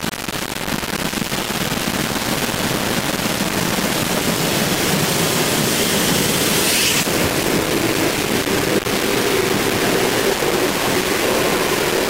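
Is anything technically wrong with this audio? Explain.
Yes. Throughout the whole clip the audio is coarse and grainy, with a harsh distortion that rises and falls with the signal itself, close to the level of the sound it rides on. Quiet passages break up into gritty fragments or flick between near-silence and a rough buzz. The likely cause is low bit depth without dither: rounding to very few levels, which fits about 3 bits, leaves an error that tracks the waveform rather than a steady hiss.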